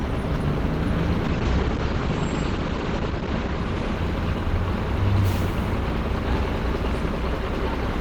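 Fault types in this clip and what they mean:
Call bitrate drop: From about 1.25 s to 4.65 s the call's bandwidth estimate sagged and the encoder was pushed onto a much smaller bit budget, roughly what you'd expect going from around 32 kbps down to about 12 kbps. You can hear it coarsen into a rough, watery texture, and the top end gets chopped off above 8 kHz so everything goes dull. It sits at its worst for about 1.8 s before the bitrate climbs back and the highs return.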